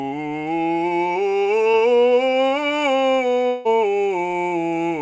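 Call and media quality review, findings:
Short concealed packet loss, 1.72–1.75 s, music: brief smear where about 20 ms of audio never arrived. Jitter buffer/decoder concealment extended the preceding sound for roughly 13 ms, then cross-faded back. Spectrogram: short horizontal streaking of prior partials.

Long network dropout, 3.47–3.68 s: about 0.2 s where the music stops progressing and becomes a sustained buzzy continuation that fades, with no silent gap, then resumes further on. Likely cause: about 180 ms lost in transit, concealed for about 176 ms. Spectrogram: frozen, decaying harmonics bridging the hole under the G.722 band edge, with nothing above 8 kHz throughout.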